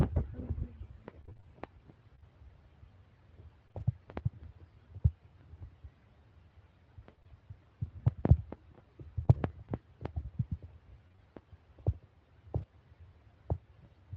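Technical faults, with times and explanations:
1.21–3.82 s, repeated packet loss (robotic sound): packets kept going missing across this stretch, about ten holes of up to 26 ms each, each one patched by stretching the preceding sound. The patches come in quick succession, so the speech turns choppy, with fragments dropped.
7.16–7.28 s, repeated packet loss (robotic sound): three packets lost in close succession, the longest hole 16 ms, and concealment filling about 41 percent of this short span. The rapid patching gives a brief stutter.
9.25–12.64 s, scattered short gaps: a few isolated packets, roughly four, went missing at separate points, each hole around 20 ms at most and filled by continuing the prior sound. The speech stays clear apart from small ticks and momentary smears.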